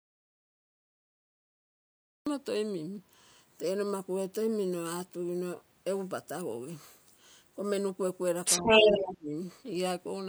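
The clip opens in a dropout to silence that is already under way and lasts until 2.27 s. There is no room tone at all, just silence. The speech then begins abruptly, mid-flow. The likely cause is that the input was lost, perhaps through a dropped link or a mute, while the recorder kept writing empty samples. Whatever was said during those first two seconds is gone.

From 8.44 to 9.12 s, the other side's voice leaks through. A second talker is heard alongside the first. It is prominent, roughly 10 dB louder than the talker's own speech. The likely cause is loudspeaker playback reaching the microphone, with the echo canceller failing to remove it.

Overlapping this, from 8.59 to 9.34 s, the talker's speech is suppressed in double talk. Both sides are speaking at once. The main voice dips, falling by around 20 dB at its deepest. Altogether about 0.7 s is affected. The echo canceller likely could not tell the talker from the echo, so it turned everything down together.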